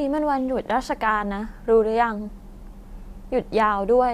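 No technical faults are audible.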